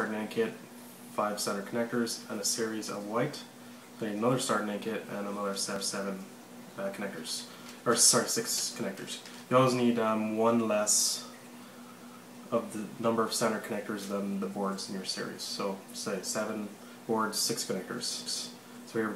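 At 5.76, 12.01 and 18.26 s, overlapping chunks replay 250 ms at each 6-second join, heard as stutters and seen as duplicated waveform and spectrogram segments.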